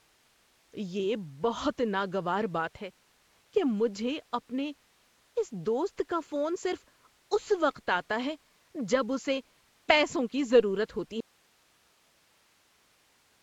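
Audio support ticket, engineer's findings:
Rough, hissy, underwater-sounding speech throughout, nothing above 7.7 kHz. Likely Nellymoser compression: coarse block coding starves weak bands, which get noise fill, and the sound fits a 32 kbps stream. Spectrogram: hard ceiling, blotchy smeared texture.

Audio dropout to a faint residue from 11.20 s to end. Signal cuts abruptly, leaving only hiss about 40 dB down. Likely source lost while the downstream path stayed live. Waveform: sudden collapse to a thin noise floor. Spectrogram: uniform faint haze.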